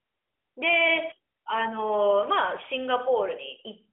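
No technical faults are present; the speech carries the narrow, telephone-like band of the AMR narrowband mobile codec, with light coding texture that fits a 12.2 kbps mode, a line band of roughly 300 Hz to 3.4 kHz, and nothing audible above about 3.6 kHz.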